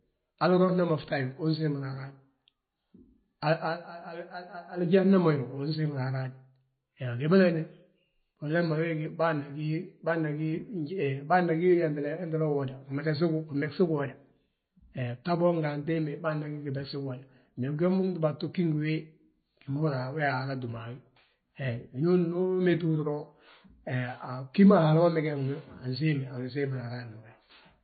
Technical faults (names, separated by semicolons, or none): MP3 compression